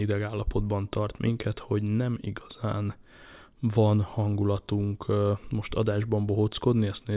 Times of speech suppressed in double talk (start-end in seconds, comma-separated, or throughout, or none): none